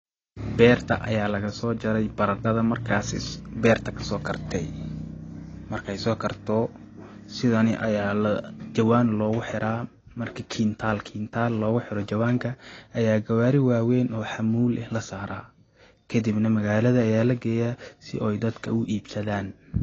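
AAC compression throughout: nothing above 8 kHz, leaving dull, smeared speech with warbling, fizzy sibilants, likely from low-bitrate AAC-LC coarsely quantising its spectrum.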